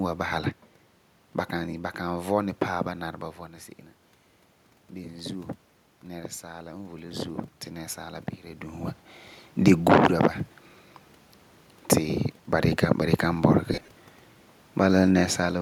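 From 4.95 to 8.93 s the voice and room noise swell together by about 6 dB: automatic gain rising, the gain control slowly compensating after the input fell by about 13 dB. Near 3.0 s and 8.5 s the talker's distance shifts, which is ordinary movement.

Between 13.72 and 13.91 s the speech breaks into brief noisy smears: lost LE Audio frames, about 112 ms missing across 180 ms in short runs up to roughly 30 ms, the decoder filling each hole with a randomised copy of the last spectrum.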